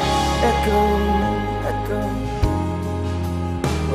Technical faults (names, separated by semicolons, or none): none